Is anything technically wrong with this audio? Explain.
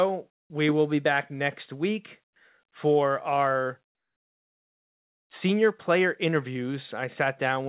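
Yes, there are two related faults in this speech.

Comfort noise in place of the background appears at 0.32–0.50 s (before "we will be back"), 2.24–2.36 s (between "be back next week" and "for our"), and 3.86–5.3 s. It is likely caused by discontinuous transmission, where the receiver fills the pauses with synthetic noise. The natural room sound gives way to a flat, featureless hiss that is about 9, 14 and 12 dB quieter respectively.

The onset is clipped by the voice detector at 0.48–0.50 s, just before "we will be back". The detector was likely slow to register renewed sound, so the first 20 ms went unsent and comfort noise played instead. The phrase therefore begins abruptly, without its soft attack.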